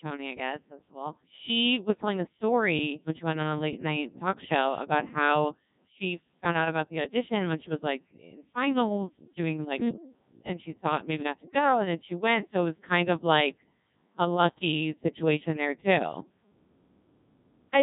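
Throughout, heavy Codec 2 vocoder damage: speech is resynthesised from pitch and envelope, sounding robotic and buzzy, with nothing above 3.8 kHz, at about 1.6 kbit/s.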